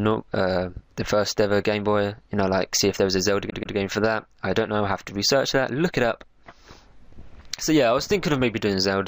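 Repeated frames from 3.49 to 3.75 s: a 130.6 ms block of compressed frames is replayed twice more, making the sound stutter and lengthening it by 261 ms.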